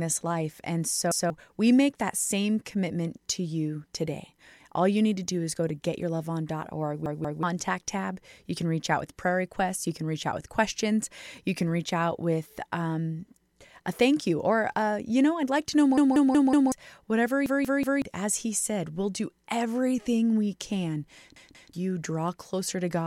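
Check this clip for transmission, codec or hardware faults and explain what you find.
The speech has one recurring fault, a repeated buffer, at 1.1–1.3 s, 7.06–7.43 s, 15.98–16.72 s, 17.46–18.02 s and 21.36–21.73 s. Fresh audio failed to reach the output in time, so the device replayed its last block of about 186 ms, which fits an 8192-sample buffer. That block sounds once more at 1.1 s, twice at 7.06 and 21.36 s, three times at 17.46 s and four times at 15.98 s, giving a hard-joined stutter that swallows roughly 0.2 to 0.7 s of speech each time.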